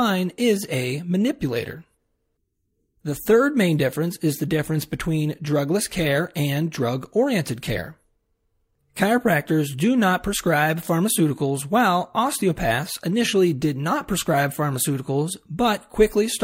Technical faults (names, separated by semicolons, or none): clock slip clicks